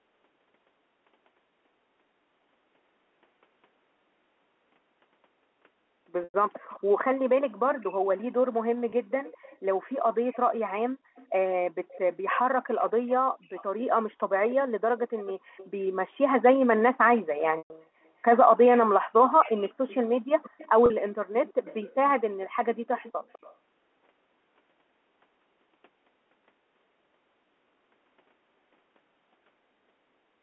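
At 6.24 s the speech briefly hangs on a buzzy, held tone for about 100 ms before it resumes. This is packet loss with pitch repetition: audio went missing, and the receiver filled the gap by looping the last pitch period and fading it down. Soon after, at 6.69 to 6.80 s, a faint scrap of the voice returns about 0.2 s late and well below the speech. This is an echo leak, likely from a far-end loudspeaker whose echo canceller let part of the microphone pickup back into the call. A much shorter concealment follows at 8.90 s, a 20 ms blip.

From 9.25 to 15.68 s, and again from 17.15 to 23.55 s, that same 202 ms delayed copy returns, roughly 20 dB under the speech, giving the sound a doubled tail. Inside the second stretch the repeated-pitch buzz returns twice: a 120 ms loss at 17.58 s long enough to fade noticeably, and a 40 ms loss at 20.86 s. The audio stays within the narrow telephone band throughout.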